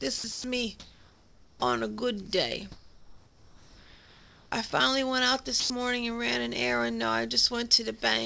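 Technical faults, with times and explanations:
0.18–0.24 s, 0.32–0.44 s, 4.70–4.72 s and 5.60–5.70 s: sound dropped by the voice detector. The sound cuts out for 60, 120, 20 and 100 ms and is replaced by steady, featureless noise before returning. The likely cause is the sender's voice detector treating quiet passages as background and stopping transmission, so the receiver filled each gap with synthetic comfort noise. In the last gap, about 80 ms of real sound is lost.
0.80–1.62 s and 2.72–4.52 s: comfort noise in place of the background. In these stretches the real background gives way to a smooth, detail-free hiss. In the first stretch the background sits about 30 dB below the loud parts, and the substitute comes in about 2 dB louder. In the second it sits about 27 dB below, and the substitute is about 3 dB quieter. The likely cause is discontinuous transmission: the sender went silent during pauses, and the receiver generated noise roughly matched to the background.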